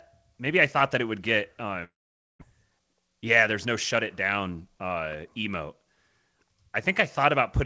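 Speech carried over a G.722 call path, band-limited to 8 kHz, has two faults. From 1.84 to 2.43 s the audio trails off into a fading buzz and then silence for about half a second, likely a long network dropout in which roughly 400 ms of speech never arrived. From 2.64 to 4.70 s a jitter buffer speed-up plays the speech about 7% fast at unchanged pitch, trimming roughly 150 ms of backlog and sounding hurried.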